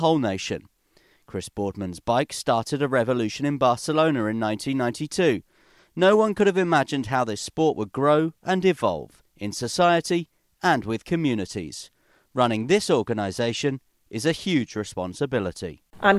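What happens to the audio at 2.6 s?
Nothing goes wrong at 2.6 s; the speech carries on intact through that moment, with no dropout, click, distortion or other fault audible there.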